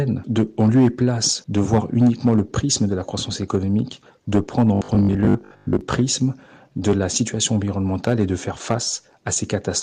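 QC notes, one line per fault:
4.75–5.81 s, robotic sound from repeated short buffers: a rigid 50 Hz metallic buzz, likely from 20 ms chunks replayed over about half the audio, with no silent gaps as in dropouts.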